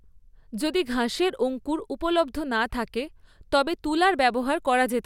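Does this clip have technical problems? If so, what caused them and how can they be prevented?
No, nothing in this speech recording points to a technical problem. There is no fault here to trace to a cause, so nothing needs preventing.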